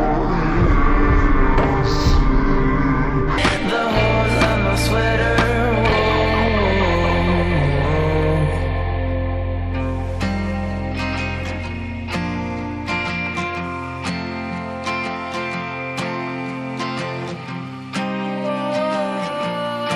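For the first 3.38 s the audio plays at half speed and drops a full octave, the classic stereo read as mono fault: interleaved left and right samples get read in sequence as one channel, which doubles the length and leaves a fainter mirrored copy up in the top half of the spectrum.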